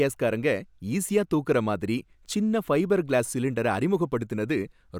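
The most likely cause is a brief gap in the sample stream at 3.74 s, just after "சின்ன ஃபைபர் க்ளாஸ் சிலிண்டரை", where a fraction of a millisecond of samples went missing. These are dropped samples: the waveform leaps straight from one value to a later one instead of moving smoothly between them. Far too little is lost to remove any of the speech. The jump is heard as a single sharp click, a thin vertical line across the spectrum.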